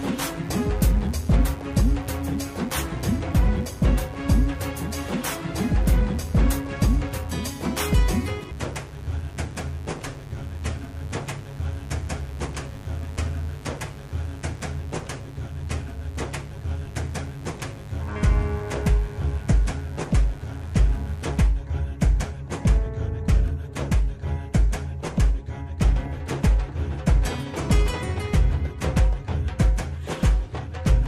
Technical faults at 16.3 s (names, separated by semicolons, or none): mains buzz